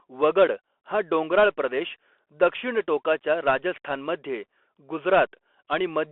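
Throughout the speech there is a narrow, boxy tone with nothing above about 3.4 kHz or below 300 Hz, a grainy hiss underneath, scratchy s sounds and rough, distorted peaks. This is the Bluetooth CVSD headset codec: one-bit delta coding, which fits a 64 kbps link, whose adaptive step cannot keep pace.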